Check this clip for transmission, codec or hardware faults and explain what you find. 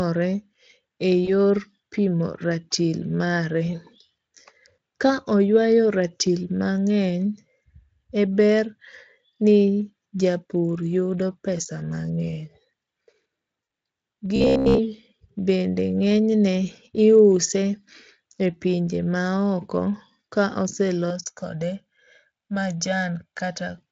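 Three kinds of fault are audible: packet loss concealment at two points, a robotic buzz just after the second one, and channel delay comb filtering near the end, all heard through light Speex coding.

VoIP packet loss concealed by the speech codec, 1.25 to 1.31 s and 13.63 to 13.67 s: the decoder filled roughly 20 and 40 ms of missing audio, consistent with one and two lost frames, by extrapolating. The speech briefly smears into a fading buzzy tone or coloured noise.

Robotic sound from repeated short buffers, 14.36 to 14.80 s: this is likely caused by the software replaying short chunks of audio while new data lagged. Most of the passage becomes a rigid, metallic 66.7 Hz buzz, which fits a repeated buffer of about 15 ms.

Channel delay (comb filtering), 21.10 to 23.78 s: one channel lags the other by around 1.5 ms before the two are summed to mono. This cancels evenly spaced frequencies starting near 400 Hz, so the speech sounds hollow and phasey.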